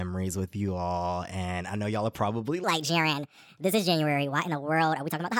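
Speech, with a section at the wrong speed from 2.64 s to the end at 5.39 s. The playback there is likely clocked fast, running 1.41 times too quickly, so the voice abruptly rises by about seven semitones and sounds hurried, with everything compressed in time.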